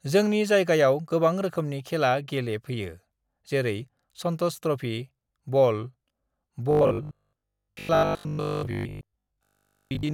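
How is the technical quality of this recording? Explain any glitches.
The recording is clean until 6.71 s, then turns robotic from there to the end at 10.13 s. A rigid, metallic buzz at 50 Hz appears, though the speech still roughly follows its shape. The likely cause is robotic sound from repeated short buffers: new audio arrived too slowly, so a 20 ms slice was looped over and over, for roughly seventy percent of that stretch, while real audio was skipped. The waveform shows identical cycles repeating every 20 ms. The spectrogram shows evenly spaced harmonics of 50 Hz, flat and unwavering.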